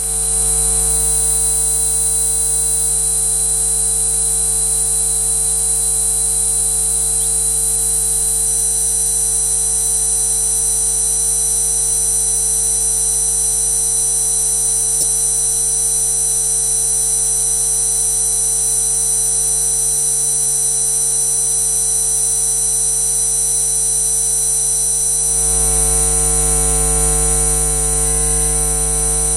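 The audio sounds dull throughout, with the top end missing and a gurgling, granular roughness in what remains, as if upper frequency bands were switching in and out from moment to moment. This is plainly audible and is most likely MP2 compression at a low rate, consistent with about 80 kbps, where the encoder cannot give all 32 sub-bands enough bits. It drops the highest bands entirely and quantises the rest coarsely, producing that flickering, watery texture. From 14.93 to 15.13 s, a burst of DAB burbling cuts across the audio for about 0.2 s. Bit errors from weak reception have slipped past error correction into the MP2 data, so corrupted samples put short blips of noise into individual sub-bands, and corrupted scale factors make sub-bands leap in level for up to a frame. The length of the burst fits around ten damaged frames, with an error rate on the order of a fraction of a percent.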